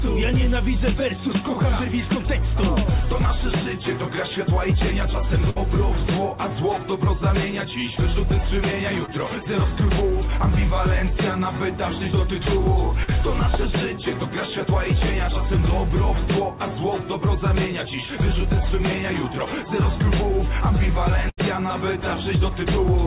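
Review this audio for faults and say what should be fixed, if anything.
Burst of packet loss at 5.50–5.58 s and 21.30–21.39 s: about 60 and 80 ms vanish, bridged by a fading held buzz or hiss, longer than the short losses below.

Short concealed packet loss at 9.06–9.10 s and 13.04–13.10 s: 20 and 40 ms gaps are filled from the preceding sound, leaving brief smears or wobbles rather than an audible fade.

The audio runs through the narrow call band, which has nothing above 4 kHz. A larger jitter buffer and forward error correction or redundancy would prevent both.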